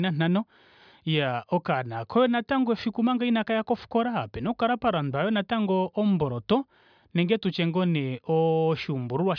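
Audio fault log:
No fault can be heard in this speech clip.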